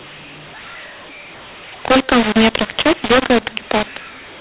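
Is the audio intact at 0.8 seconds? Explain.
No. At 0.8 seconds the speech carries a mu-law and A-law mix-up, present throughout the clip. Samples written with A-law are decoded as mu-law, so levels are remapped unevenly, some too loud, others too soft. The speech sounds harsh and distorted, and quiet gaps fill with noise.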